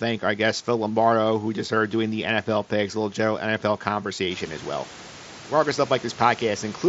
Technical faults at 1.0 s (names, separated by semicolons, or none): none